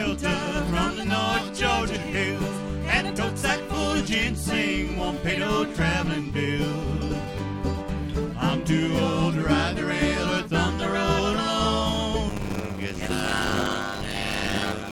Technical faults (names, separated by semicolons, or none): block size mismatch (padded)